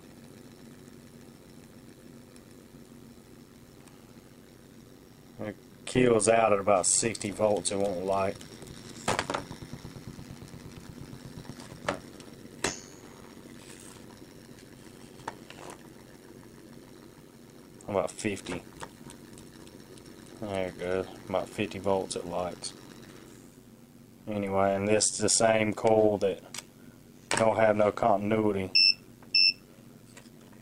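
Overlap-add ripple runs through the entire clip. Frames were windowed and recombined with an overlap that fails to sum to constant gain, so the level swings by about 11 dB at around 100 Hz, heard as a rough, buzzy robotic flutter.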